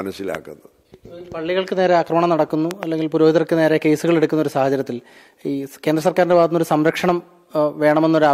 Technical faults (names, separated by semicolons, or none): loud pop